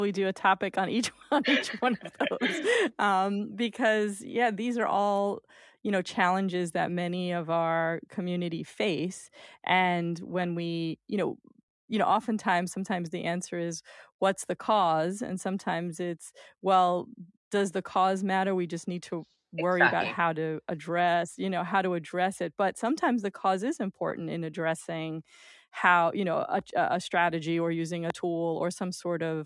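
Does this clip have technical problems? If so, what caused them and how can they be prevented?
No, nothing in this speech recording stands out as a technical fault, so there is no cause to trace and nothing to prevent.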